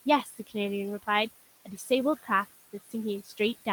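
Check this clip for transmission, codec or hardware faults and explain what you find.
Two faults come from an over-aggressive noise suppressor in the speech path; the hardware and codec side shows nothing further to report.

Noise suppressor artifacts run throughout: the suppressor pulls down bands it judges to be steady noise by about 14 dB, so the room noise, sitting about 18 dB under the speech, pumps between phrases.

Speech cut by the noise suppressor occurs at 0.24 to 0.55 s, 1.65 to 1.9 s, 2.73 to 2.94 s and 3.24 to 3.4 s, each affecting roughly a tenth to a fifth of a second. The suppressor mistakes quiet speech for noise and drops it by about 15, 10, 14 and 12 dB respectively, so those soft syllables sound swallowed and faint.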